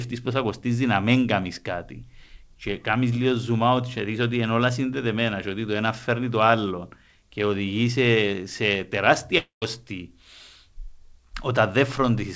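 Likely a long network dropout at 9.38–9.65 s: the speech smears into a fading buzz, goes silent, then resumes with 0.24 s missing.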